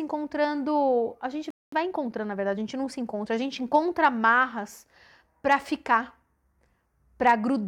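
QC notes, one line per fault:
1.50–1.72 s, playback stall: the speech halts into silence for about 220 ms, then resumes where it stopped, likely because the player ran short of data.
1.72–3.90 s, time-compressed catch-up: speech runs 1.1 times fast at normal pitch, as small pieces are cut and cross-faded, unlike a sped-up resample, which would raise pitch.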